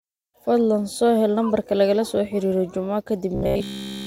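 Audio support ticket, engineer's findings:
Robotic sound from repeated short buffers, 3.35–4.07 s. Speech becomes a rigid metallic buzz at 66.7 Hz, i.e. a 15 ms loop. Likely starved playback repeating the last buffer. Unlike dropouts, no gaps; unlike distortion, a fixed imposed pitch.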